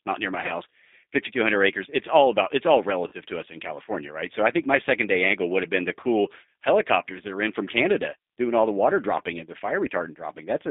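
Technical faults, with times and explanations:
throughout, G.729 codec: The whole call sits in a narrow phone band from about 250 Hz to 3.7 kHz, so there's no low warmth and no air on top. The speech has that slightly rough, synthetic edge you get when a coder rebuilds it from a vocal tract filter, a pitch predictor and a few pulses per frame instead of sending the actual waveform. The damage is plainly audible, which fits an 8 kbit/s G.729A coder.
0.46–0.52 s, 3.08–3.13 s and 6.01–6.05 s, VoIP packet loss concealed by the speech codec: Three short dropouts of roughly 30, 40 and 20 ms. Rather than going silent, each gap gets filled by the decoder extrapolating from the last pitch and filter it had, with the level stepped down as it goes. That's why these spots come out as a brief smeared, buzzy or tonal stretch that fades instead of a clean hole.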